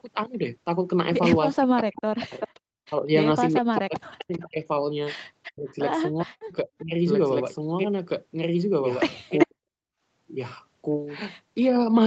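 Echo leak appears at 0.33 s, 1.96–2.48 s, 3.54–4.41 s, 5.43 s, 6.78 s and 9.38 s: a copy of the speech trailing by roughly 0.4 s. It ranges from faint, about 40 dB down, to about 5 dB louder, likely from residual echo the canceller missed. Between 1.55 and 6.94 s, and again at 9.46–9.65 s, the speech is suppressed in double talk, dropping by up to roughly 40 dB in pieces, likely because the canceller attenuated the talker along with the echo.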